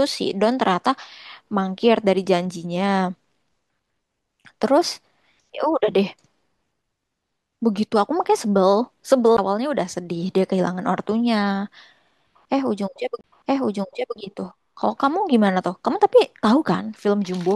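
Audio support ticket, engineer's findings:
Two ticks with a sudden jump in the speech, at 9.37 s and 13.21 to 13.24 s, each a very short silence (around 15 ms, then around 30 ms). CD skip: disc transport, laser jumped onto another turn of the spiral, muting and resuming out of place.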